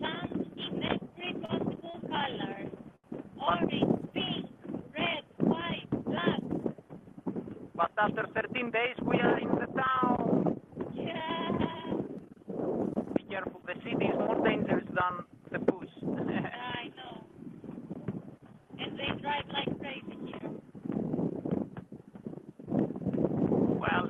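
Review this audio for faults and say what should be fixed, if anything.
Short stalls from a late packet occur at 1.45 to 1.52 s, 1.91 to 1.97 s and 2.96 to 3.07 s. The jitter buffer ran dry, so the receiver held the last sound for 33, 30 and 81 ms until data arrived, losing nothing but adding delay. A larger or faster-adapting jitter buffer target would prevent this.

A jitter buffer speed-up runs from 8.54 to 9.67 s. After the buffer had grown past its target, the receiver trimmed short pitch-period pieces repeatedly, playing at 104% speed with pitch unchanged and removing around 50 ms. Smoothing network delivery so packets do not arrive in bursts would prevent this.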